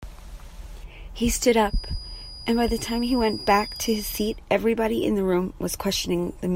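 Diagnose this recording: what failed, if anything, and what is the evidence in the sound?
Feedback whistle, 1.63 to 4.41 s: a steady 4.9 kHz tone sits about 15 dB under the speech, likely a loudspeaker-to-microphone loop at feedback's edge.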